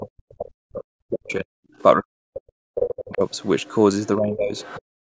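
DC offset runs through the whole clip. The entire waveform sits shifted away from zero by a constant amount, so the centre line of the signal is displaced rather than balanced. You can't hear this directly, but it eats into headroom on one side of the waveform and shows up as a steady component at the very bottom of the spectrum. It is separate from the call's microphone processing, whose band tops out at 8 kHz.

Speech suppressed in double talk comes first from 0.0 to 1.54 s, again from 1.95 to 3.21 s, and more mildly from 4.17 to 4.58 s. In the first two stretches the voice sinks by as much as about 40 dB and thins out or breaks up. In the third the dip is shallower, around 15 dB. The likely cause is an echo canceller that couldn't tell the near talker from loudspeaker echo while both sides spoke, so it pulled everything down.

The other side's voice leaking through appears in brief scraps at 1.28–1.32 s and 1.78–1.83 s, then in longer passages at 3.3–3.73 s and 4.56–4.82 s. 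It sits well below the main voice, roughly 20 to 30 dB down. This is most likely far-end audio from the loudspeaker that the echo canceller failed to remove fully from the microphone. The last passage overlaps the tail of the third suppression.

Background gated by the echo canceller closes the clip from 4.86 to 5.13 s. Here the room sound itself drops away by about 38 dB, for roughly a third of a second. While loudspeaker output was present, the canceller clamped the microphone hard, silencing the ambience along with any residual echo. The clip ends before the canceller releases and the background returns.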